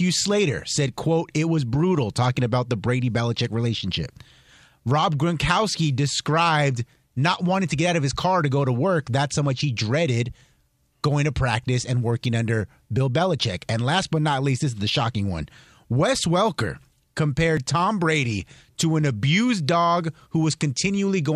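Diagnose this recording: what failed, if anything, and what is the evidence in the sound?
Network and streaming stage: overlap between stream segments, with 4-second segments' timestamps colliding, made the player discard genuine speech, causing a brief skip at 17.57 s.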